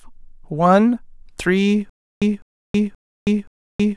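From 1.90 s to the end of the speech, a stutter with silent gaps takes over: the same 205 ms fragment plays four times, each followed by about 320 ms of dead digital silence, so the burst returns steadily every 526 ms. The likely cause is a stalled player or stream that replays its last buffered fragment at each retry and then runs dry, so the speech that belonged in those gaps never arrives.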